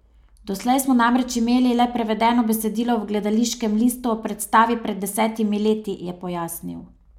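No technical faults can be heard in the speech.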